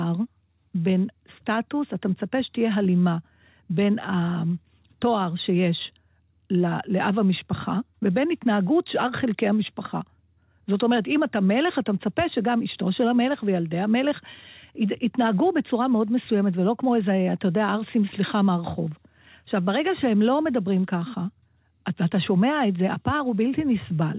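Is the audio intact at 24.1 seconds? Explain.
Yes, the audio is intact at 24.1 seconds, with no dropout or other fault there, only the ordinary narrowband sound of the call path with nothing above 4 kHz.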